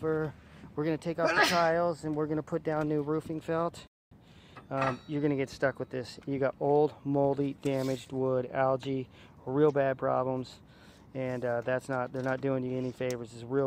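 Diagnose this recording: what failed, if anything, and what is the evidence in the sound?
A rebuffering stall at 3.87 s to 4.11 s, a playback-stage failure. The sound drops abruptly to silence for 240 ms and then picks up exactly where it broke off, with nothing skipped or repeated. That signature points to the player draining its downloaded buffer and halting output until more data arrived from the network. No audio is lost; the stream is simply stretched by that quarter-second gap.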